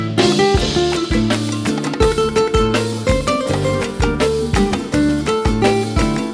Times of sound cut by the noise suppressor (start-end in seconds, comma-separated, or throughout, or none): none